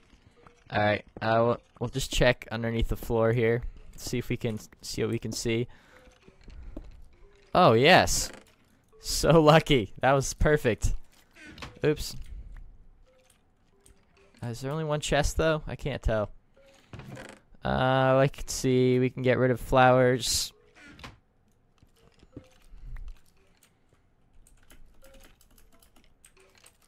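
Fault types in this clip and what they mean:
adaptive stream starting at a low bitrate: for the first 2.0 s the player uses a lean rendition for fast startup. Nothing sounds above 11.8 kHz and artefacts are heavier, fitting 16 kbit/s HE-AAC. Quality then jumps seamlessly, consistent with AAC-LC near 96 kbit/s.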